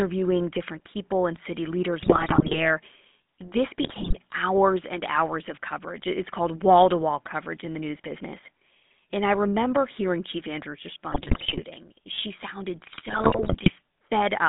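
Throughout, the speech carries the buzzy, gravelly roughness of the GSM full-rate codec. The band runs from about 200 Hz to 3.6 kHz, which fits 13 kbps GSM. A spectrogram shows nothing above 3.6 kHz and smeared, grainy harmonics below it.

GSM bit errors break in at 2.02–2.67 s and 3.82–4.17 s. Corrupted filter, pitch and gain values make the speech squawk, pop and gargle. The waveform shows sudden level spikes, and the spectrogram shows frame-sized blocks of misplaced energy.

A loose connector crackle follows at 6.23–6.29 s. An intermittent contact chops the signal into a brief scratchy burst. On the waveform this is a cluster of jagged dropouts and steps, and on the spectrogram thin broadband vertical streaks.

GSM bit errors return at 11.1–11.63 s and 12.86–13.75 s, with the same gargling squawks and block-shaped spectral disruption.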